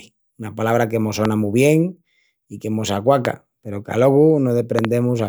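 Loud pops land at 1.25 to 1.27 s, between "una palabra que mos" and "mu bien i que"; at 3.25 to 3.27 s, after "bien i que mos"; and as a double pop at 4.79 to 4.87 s. Each is a sharp thump roughly 15 dB above the speech, which continues underneath. They are likely voltage spikes from a connector, switch or static discharge, shaped by the circuitry that follows.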